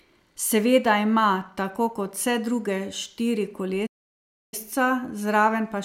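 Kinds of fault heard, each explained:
Playback stall: the player likely ran out of data or was blocked, so the speech cuts to silence at 3.86 s for 660 ms, mid-flow.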